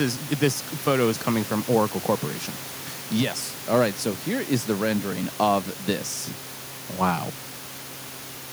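No technical faults can be heard in this speech.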